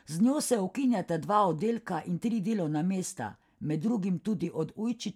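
Speech recording with no audible technical faults anywhere in it.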